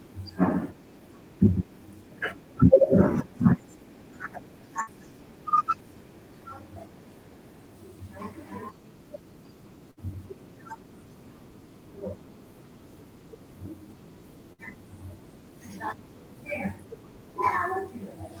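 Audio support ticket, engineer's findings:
Burst of packet loss at 4.81–4.90 s, 9.91–10.00 s and 14.53–14.61 s. Each about 85 ms: roughly 56 ms of concealment fades out as a held buzz or hiss, then 60 ms of audio is skipped. Probable component: network path.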